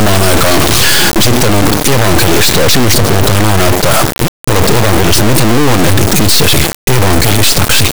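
From start to finish the speech is replaced by an extremely loud, harsh buzzing square wave that cuts to silence in the quietest moments. This is integer read as float: 32-bit integer samples are interpreted as 32-bit floats, so values land near zero or far beyond full scale.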